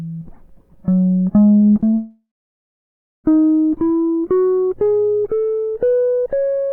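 Starting around 1.59 s the music goes choppy, a run of repeated packet loss lasting to 1.98 s. There are five short holes, the longest about 22 ms, and each one is papered over by stretching the last bit of sound. About a fifth of that stretch is patched rather than real, so you hear choppy sound with small pieces of the music missing.

Right at 1.98 s it gets worse: the sound smears into a fading buzz or hiss, then goes silent for roughly a second before the music resumes at 3.26 s. About 1.26 s of material is simply gone, with no catch-up. That's most likely a long network dropout, where nothing arrived, the receiver extended the last sound briefly, and then it gave up and left silence until the stream came back.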